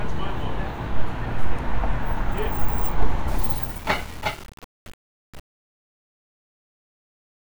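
Truncation distortion on a fade runs from 3.28 s to 7.57 s. The fade-out, consistent with 7-bit undithered steps, turns gritty near its end.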